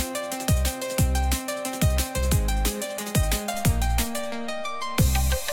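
At 3.54 s a DC step occurs: the waveform's zero line jumps to an offset of about −33 dBFS and holds there until the end at 5.52 s. The sudden shift registers as a single low thump, while the audio itself continues unchanged.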